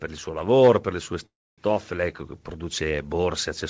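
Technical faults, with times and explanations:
0.24 to 3.7 s, automatic gain rising: from 0.24 s onward the level climbs steadily through to the end of the clip, with the speech and the background noise floor swelling together rather than the speech alone getting louder. That joint rise is the signature of an automatic gain control that judged the input too quiet and kept pushing its gain up gradually, so everything in the signal path, wanted or not, is amplified by the same amount.
1.26 to 1.60 s, call audio freeze: the sound stalls for about 0.34 s. The last sound is carried on briefly as a decaying buzz or hiss and then drops to near silence for roughly 270 ms before the speech resumes exactly where it stopped. Nothing is lost; instead about 317 ms of extra delay is inserted. This is likely packets held up in transit, draining the jitter buffer so the receiver had to fill the gap until they arrived. 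The call path's G.722 coding, with nothing above 8 kHz, shapes the filled sound as well.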